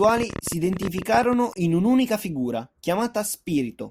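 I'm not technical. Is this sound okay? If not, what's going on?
No. Early on, something seems to be feeding sharp electrical pulses into the recording, likely interference from nearby equipment or a faulty connection or power supply. This is called a train of clicks. From about 0.04 to 1.34 seconds you hear roughly twenty quick pops, about 16 per second but unevenly spaced, ticking over the speech and standing out clearly above it, with each pop sounding much the same.

Shortly after, between 1.51 and 1.56 seconds, part of the compressed audio file itself is corrupted. This is damaged data in a compressed stream. The playback software hits bytes it can't make sense of, loses its place and has to hunt for the next readable chunk. For that twentieth of a second, the speech turns into a brief chirp or blip, and the sound may jump slightly ahead.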